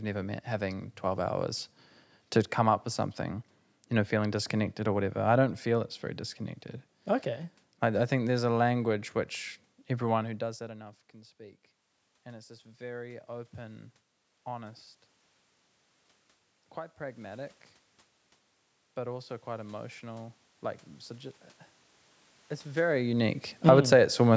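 From 10.24 to 14.89 s, automatic gain rising: after the talker drops back around 10 s, the input falls about 21 dB, and the gain climbs about 8 dB, swelling speech and room noise together. At 23.53–23.91 s, automatic gain falling: the input grows too loud or too noisy for the gain, which pulls down about 6 dB, sinking the sound. From 23.82 to 24.3 s, gain rises again about 6 dB.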